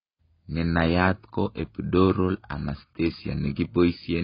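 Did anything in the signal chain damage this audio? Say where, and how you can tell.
Yes. The speech is dull and watery throughout, with fizzy sibilants and nothing above 5.2 kHz. This is likely heavy AAC compression at the codec stage, consistent with about 16 kbps.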